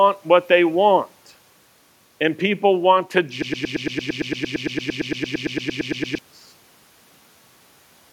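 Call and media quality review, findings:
Broken-record loop, speech, 3.42 to 6.19 s. A fragment of about 0.11 s (113.69 ms) repeats back to back, 24 times, and the speech for that span is lost. The likely cause is a stalled player or decoder re-sending its last held buffer. It differs from packet-loss concealment, whose fill fades and changes from repeat to repeat. These repeats stay identical, keep full level and keep a fixed period until normal playback resumes.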